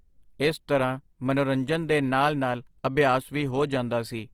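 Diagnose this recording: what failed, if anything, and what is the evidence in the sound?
Opus compression, throughout the speech: the codec stage failed. Tones turn rough, grainy and noisy rather than swirly, and content still reaches 20.2 kHz. This is likely Opus in CELT mode, near 24 kbps, keeping each band's energy but filling starved bands with folded or noise content.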